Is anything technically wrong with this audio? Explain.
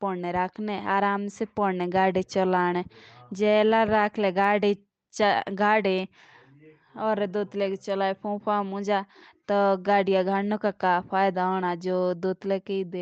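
No, nothing technically wrong stood out on listening to this speech.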